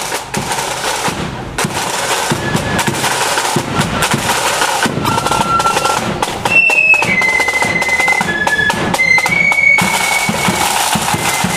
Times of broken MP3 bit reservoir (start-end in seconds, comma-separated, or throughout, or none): 5.05-5.09